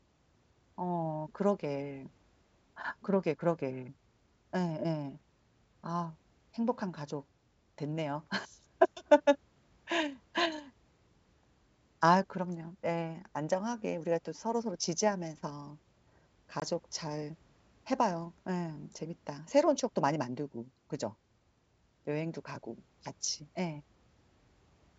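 A short, hard-edged dropout cuts into the speech at 16.60 to 16.63 s, and the sound comes back slightly distorted before settling. This is packet loss on an ADPCM call, the G.722 wideband stream here: about one packet, some 20 ms of audio, went missing and was filled with silence. The decoder's adaptive predictor and step size then no longer matched the sender's and needed a few tens of milliseconds to resynchronise.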